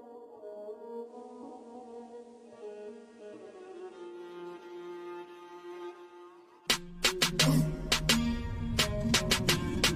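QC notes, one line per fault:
1.01–4.19 s, digital radio blending to analogue: a soft hiss about 40 dB down rises at unchanged level; the receiver lost its digital stream and cross-faded over 157 ms to the station's FM broadcast, then back.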